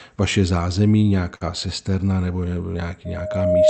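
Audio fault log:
1.35–1.42 s, short stall from a late packet: just after "vaše zázemí" a sound is held about 54 ms too long, as the receiver stretched it while waiting, losing nothing.
3.05–3.70 s, loudspeaker feedback squeal: a 619 Hz tone swells over roughly 0.7 s to about 10 dB above the speech, as the microphone re-amplifies the loudspeaker.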